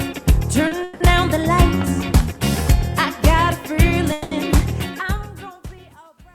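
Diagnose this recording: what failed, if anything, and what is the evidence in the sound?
Short stall from a late packet at 0.67–0.74 s: network jitter emptied the receive buffer, so the sound is held about 40 ms with a slight buzz or dip, then resumes intact.

Call audio freeze at 0.83–1.03 s and 4.12–4.34 s: the sound stretches into a fading buzz or hiss for 170 and 190 ms, likely from packets delayed in the network, then continues without loss.

Truncation distortion on a fade from 4.72 s to the end, worst after 5.79 s: the fade-out beginning near 4.7 s grows gritty as an undithered volume stage, consistent with 11-bit resolution, reduces it to coarse steps.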